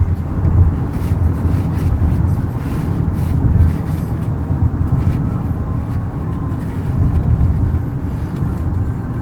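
No technical faults can be heard.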